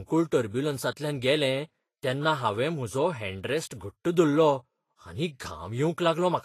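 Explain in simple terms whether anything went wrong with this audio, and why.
From start to finish, the speech sounds hissy and grainy, and nothing is left above about 14.2 kHz. This is likely Vorbis compression at a low setting: the encoder discards the top treble and quantises the remaining detail so coarsely that it becomes rough noise.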